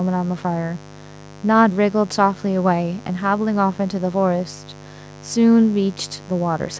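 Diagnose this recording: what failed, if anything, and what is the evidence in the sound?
A mains buzz runs through the whole speech clip, from start to finish. The fault sits in the analogue wiring, before the converter. The buzz is steady and raspy, not a smooth hum. It is built on 50 Hz, with a dense stack of harmonics climbing well into the kilohertz range. It sits roughly 20 dB below the speech. Sharp switching spikes, from a dimmer, a rectifier or an unshielded run, enter twice per mains cycle and produce that harsh edge. The call's microphone processing limits the band to 8 kHz.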